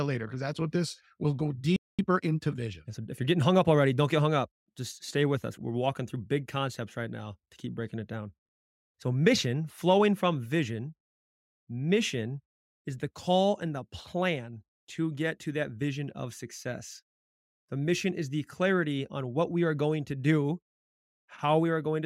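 At 1.76 s, right after "what this will go", the player most likely ran out of buffered data or had its playback thread blocked, so nothing reached the output. This playback stall leaves the speech cut off mid-flow in dead silence for about 223 ms, until 1.99 s. The voice then resumes at the point where it stopped, with no missing material.

From 1.99 s to 3.47 s the player works off the backlog that piled up during the stall. It snips out small pieces of the signal and cross-fades across each cut. This time-compressed catch-up runs the speech at 1.15 times normal speed without raising the pitch, so the voice sounds hurried. Normal pacing returns just before "up already don't get".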